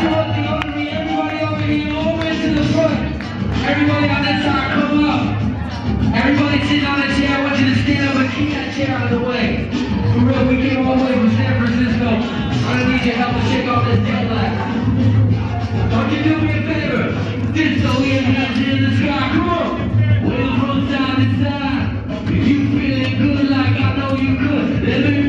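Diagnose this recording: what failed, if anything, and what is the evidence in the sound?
Nothing failed; no fault is audible anywhere.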